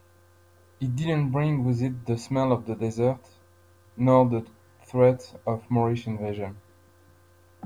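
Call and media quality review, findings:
Likely requantisation to a short word length, truncated without dither, throughout; error tracks the signal, consistent with roughly 10 bits. Speech sounds grainy and gritty on quiet syllables and decays, with distortion about 45 dB down. Low bit depth without dither.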